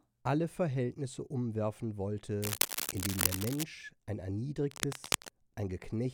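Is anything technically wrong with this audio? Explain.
Yes. From 2.42 to 3.64 s, and again from 4.68 to 5.28 s, dense, uneven scratching rustles over the speech, first about as loud as it, then somewhat quieter. This cable scratch noise likely comes from a worn cable or connector being moved, its contact resistance fluctuating rapidly.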